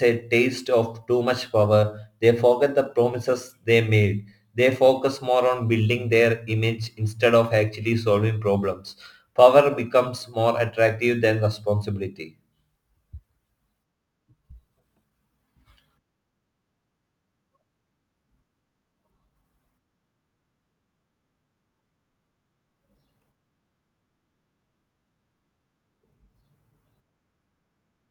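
From start to finish there's crude rate conversion on this speech. It sounds like the rate was brought down by simply dropping samples, with no filtering, and the pattern fits a move from 48 kHz to 44.1 kHz. Those skipped samples leave a repeating error, sitting roughly 30 dB under the speech, that makes shifted, inharmonic copies of the voice. You hear it as a gritty, inharmonic fizz that rides along with the louder and brighter parts.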